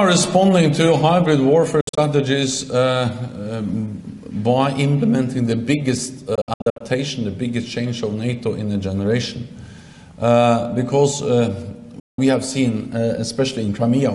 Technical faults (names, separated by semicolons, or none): Bluetooth dropout